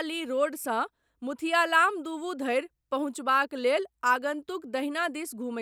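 Speech with no audible faults.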